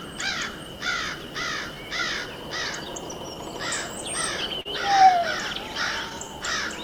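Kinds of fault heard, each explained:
Clock drift between sender and receiver: throughout, the sender's clock runs about 3% slow, so the receiver's buffer keeps draining and must be topped up.
Repeated timing corrections: from 0.51 to 6.78 s, the receiver repeats short pieces, playing at 98% speed and adding roughly 150 ms.
Short stall from a late packet: at 4.61 to 4.68 s, a packet arrived late and the last sound was held 39 ms, with nothing lost.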